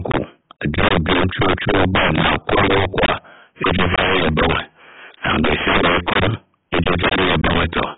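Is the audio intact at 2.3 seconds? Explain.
No, 2.3 seconds falls inside two problems that run through the whole clip. The first is integer overflow. The speech is driven about 17 dB past full scale, and instead of being limited, the loudest peaks wrap around to the opposite sign and jump across the entire range. That hits a small but steady share of the samples, somewhere around 7 percent, so at 2.3 s you get harsh, violent cracks on the louder moments, far sharper and nastier than ordinary clipping.

On top of that, the top end is gone: nothing comes through above 3.8 kHz, so the speech sounds dull and boxed in, with a smeared, warbly, fizzy texture on sustained sounds and sibilants. That combination points to heavy damage from AAC compression, likely AAC-LC at a very low bitrate, around 16 kbps. At that rate the encoder pulls its cut-off way down and quantises the remaining bands so coarsely that detail smears and shimmers.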